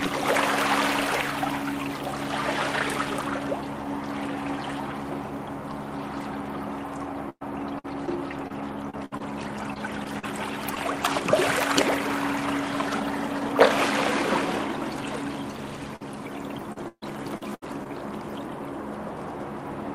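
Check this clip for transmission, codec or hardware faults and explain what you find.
Two kinds of packet loss are audible: repeated packet loss in two stretches and one isolated burst.

Repeated packet loss (robotic sound) runs from 7.29 to 11.14 s and again from 16.72 to 17.89 s. The receiver keeps patching lost or late packets by extending the previous sound, and each patch is followed soon by another. The first stretch has 11 gaps, about 11% of it concealed, the longest gap 114 ms. The second has 5 gaps, but about a quarter of it is concealed, the longest 139 ms. The result is choppy sound with pieces missing. What separates this from a burst is the recurrence: a string of holes rather than one.

A burst of packet loss occurs at 15.96 to 16.02 s, just before the second choppy stretch. This is a single gap. About 46 ms of extended, fading sound is inserted, and about 40 ms of the original audio is missing. 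The signal resumes further along, with that portion missing. Because it is one short, isolated dropout, it registers as a brief gap rather than the sustained choppiness of the repeated loss.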